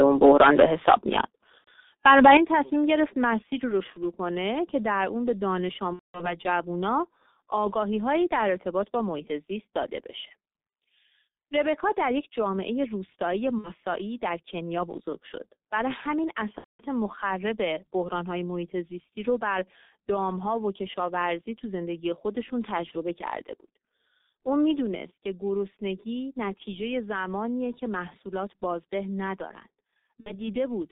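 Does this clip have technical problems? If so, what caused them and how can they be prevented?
Yes. Throughout, the call ran through the G.723.1 codec at 6.3 kbit/s on a line passing only 200 Hz to 3.7 kHz. Its coarse 30 ms frames and slow voice model leave the speech heavily muffled and hoarse, with smeared consonants. Choosing a wideband codec such as Opus at a higher bitrate would prevent this.

Microphone overload, from 0 to 1.21 s and again from 2.05 to 2.37 s, was likely caused by input gain set too high. Peaks ran about 10 dB, then about 4 dB, past the converter's limit, shaving off their tops (a few percent, then roughly a tenth, of samples) and adding a harsh, crackling edge. Setting input level with headroom before the call prevents it.

At 2.37 s the microphone volume stepped down by about 9 dB, likely as the software reacted to that clipping. Voice and background drop together in one abrupt step right after the distorted stretch. 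Fixing levels beforehand, or disabling automatic gain adjustment, prevents this jump.

VoIP packet loss concealed by the speech codec occurs at 1.58 to 1.69 s (90 ms lost), 5.93 to 6.38 s (210 ms), 13.58 to 13.70 s (60 ms), 16.58 to 16.84 s (210 ms) and 30.20 to 30.48 s (60 ms). The decoder stretched its last pitch and filter with fading gain, giving a buzzy tone or coloured noise that fades, and weakened sound afterwards. A stable wired connection, or a codec with forward error correction, prevents it.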